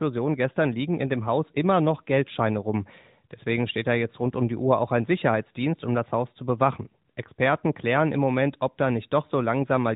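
No technical faults detected.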